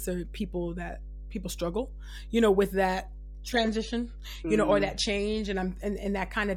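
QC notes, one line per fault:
throughout, mains hum: a steady 50 Hz drone sits under the speech, around 15 dB down, the kind of thing a ground loop or nearby transformer leaks in.
3.57 to 5.57 s, adaptive stream at a lower bitrate: right after "you know with that" the treble snaps off above 13.1 kHz and swirly artefacts jump in. It sounds like the stream briefly dropped to a much lower bitrate, with no gap.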